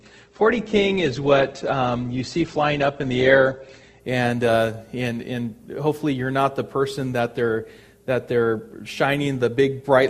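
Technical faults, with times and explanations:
0.0–4.0 s, adaptive stream starting at a low bitrate: for the first 4 seconds the audio has nothing above 8.1 kHz, and what little upper detail remains sounds thin and synthetic, with stronger codec artefacts, consistent with a roughly 12 kbit/s Opus version chosen so playback could begin at once. At 4.0 s the player, having gauged the connection, switches to a higher-rate stream, which fits about 64 kbit/s Opus. The treble returns abruptly and the artefacts drop, with no gap at the switch.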